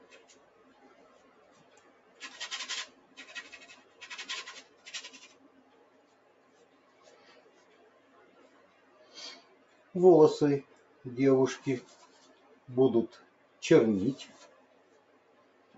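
A speech-oriented noise suppressor is running on this non-speech audio throughout, treating sustained content as noise and pumping the level by around 15 dB as held material sinks. Sound cut by the noise suppressor is clearest at 5.96–6.8 s (about 4 dB down), 13.31–13.57 s (about 4 dB) and 14.72–15.74 s (about 5 dB), where steady or decaying passages are pulled down. The call path, whose 8 kHz bandwidth leaves nothing above 8 kHz, is normal for this route.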